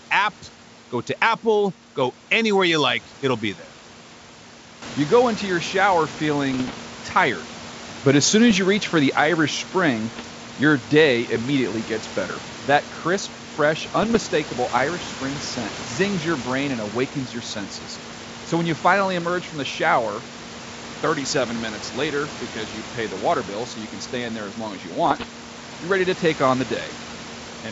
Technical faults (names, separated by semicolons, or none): bit errors on an ADPCM link